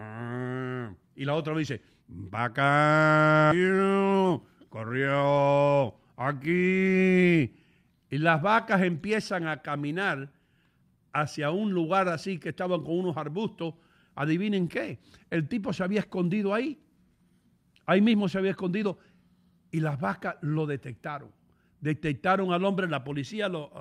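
At 3.51 s there's a skip ahead: about a second of speech just vanishes, and the two sides butt together with no gap. Right after, from 3.55 to 6.21 s, the jitter buffer speeds up to 117% by trimming pitch periods, shaving off roughly half a second so the speech sounds hurried at the same pitch.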